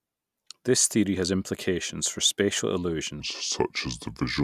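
From 3.20 s to the end, after "has implications for spatial", a wrong sample rate plays the audio at 0.73× speed, so pitch and tempo fall together by about 5.5 semitones. This fits 44.1 kHz material played at 32 kHz.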